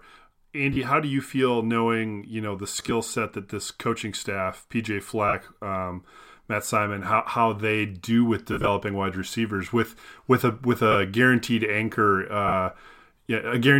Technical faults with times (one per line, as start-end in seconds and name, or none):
0.73-0.77 lost LE Audio frames
2.77-2.91 lost LE Audio frames
5.28-5.33 lost LE Audio frames
8.53-8.68 lost LE Audio frames
10.92-10.95 lost LE Audio frames
12.48-12.53 lost LE Audio frames